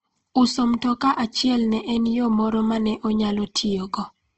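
The speech was most likely squeezed through Opus compression at a low rate, consistent with about 16 kbps in its music-oriented mode. Throughout, nothing remains above 8.3 kHz, and the speech sounds plainly grainy and rough, with noisy texture filling in where detail should be.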